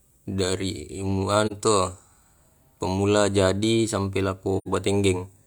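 A speech clip with AAC frame loss with muting: soft-faded gaps at 1.46 to 1.52 s and 4.57 to 4.68 s, roughly 43 and 85 ms, consistent with one and two zeroed frames.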